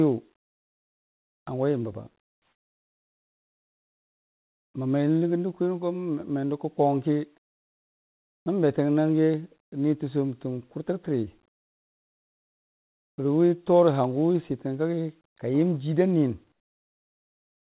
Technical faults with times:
2.22-4.74 comfort noise in place of the background

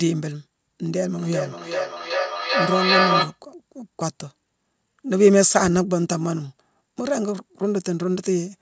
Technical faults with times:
0.90-3.39 feedback echo between two devices

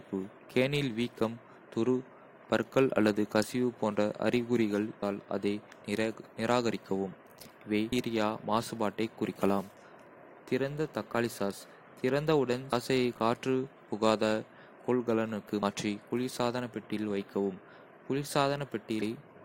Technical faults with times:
5.01 damaged data in a compressed stream
7.91 damaged data in a compressed stream
12.71 damaged data in a compressed stream
15.61 damaged data in a compressed stream
19.01 damaged data in a compressed stream

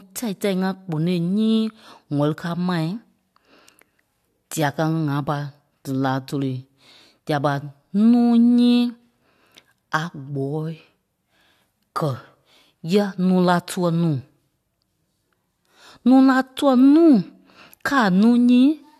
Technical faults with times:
none

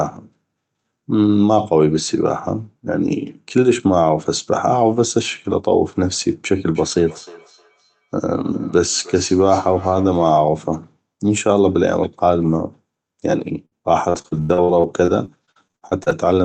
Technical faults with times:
6.74-10.48 feedback echo between two devices
13.65-16.27 repeated packet loss (robotic sound)

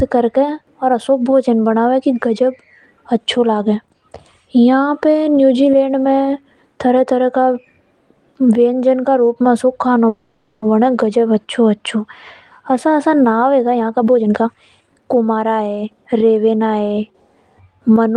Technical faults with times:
10.08-10.64 call audio freeze
13.75-16.66 jitter buffer speed-up

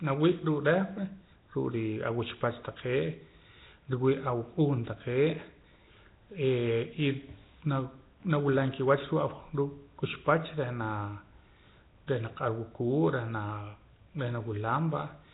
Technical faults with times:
0.00-15.34 Nellymoser compression

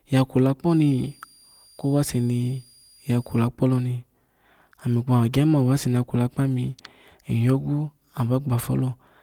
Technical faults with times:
0.70-3.47 switching supply whistle

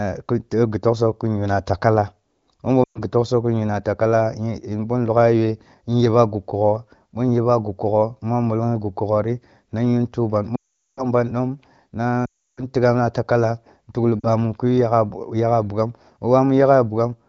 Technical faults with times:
2.84-3.01 lost AMR speech frames
10.55-11.04 lost AMR speech frames
12.25-12.64 lost AMR speech frames
14.20-14.27 lost AMR speech frames

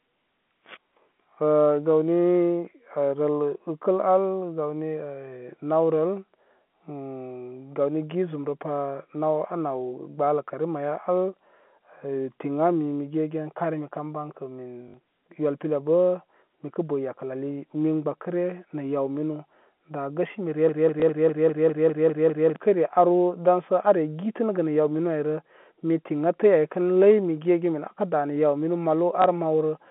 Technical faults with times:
14.88-14.94 packet loss with last packet repeated
20.69-22.56 broken-record loop
21.00 packet loss with last packet repeated
29.22 packet loss with last packet repeated

